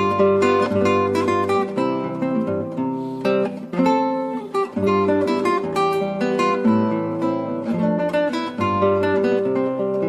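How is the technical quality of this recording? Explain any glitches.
Three brief glitches break the continuity of the sound, at 2.05 s, 4.83 s and 7.94 s. At each one the audio lurches forward, skipping about 50 ms at the first two and about 100 ms at the third. These are compressed frames skipped: whole coded frames were lost or rejected by the decoder, so playback jumps ahead by a multiple of the frame length.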